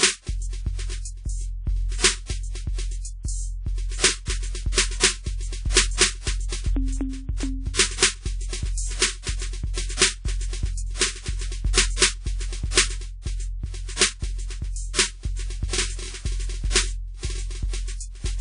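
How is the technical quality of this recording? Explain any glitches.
The technical quality is poor, with plainly audible codec damage across the whole of the music. WMA compression, running throughout, is the likely cause: a transform coder at a low bitrate, around 32 kbps, spreads its quantisation noise over long blocks and discards weak spectral detail. Nothing remains above about 10.1 kHz, so the top end sounds dull, while ringing, washy smearing and a hiss that breathes with the music sit around the instruments.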